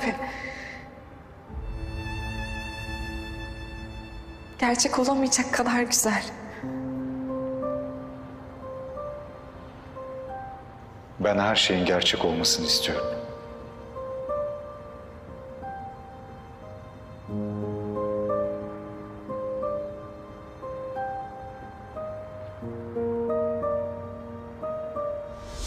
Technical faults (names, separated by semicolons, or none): none